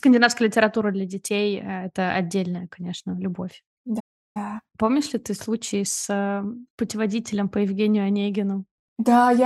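A playback stall interrupts the speech at 3.99 s, just after "это отдельная конечно любовь", and the output stays silent until 4.37 s, a gap of about 0.35 s. The sound cuts off in mid-flow rather than fading, leaving a noticeable dead pause. The likely cause is the player running short of buffered data, or its audio thread being held up, so nothing reached the output until it recovered and carried on.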